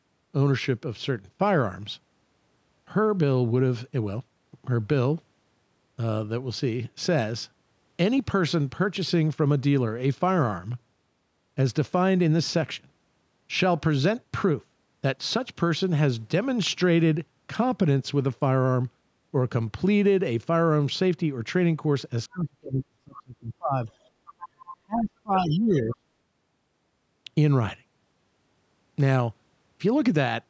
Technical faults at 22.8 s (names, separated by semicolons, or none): speech suppressed in double talk